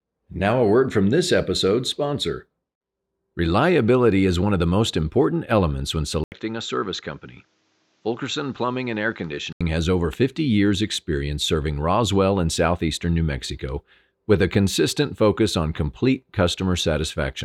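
At 6.24 s, after "most important elements when", an 80 ms gap precedes duller, slightly quieter speech with nothing above 7.6 kHz and faint background noise about 40 dB down, likely an input switched to a poorer device. Bandwidth returns at 9.61 s, before "has over".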